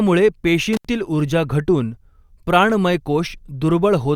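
A speech recording with an intermittent contact, where a loose cable or plug briefly opens between 0.73 and 0.89 s, cutting the sound for about 75 ms with crackle at each edge.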